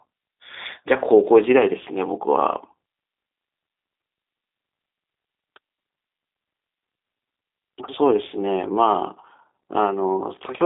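From start to finish, the speech carries the sound of the G.729 codec, here the G.729A variant at 8 kbit/s. The audio is rebuilt from a vocal tract filter, a pitch predictor and a few coded pulses per frame rather than sent as a waveform. Nothing above 3.8 kHz survives, and the line band runs from 250 Hz to 3.7 kHz. The damage is plainly audible. The voice sounds thin, slightly rough and synthetic.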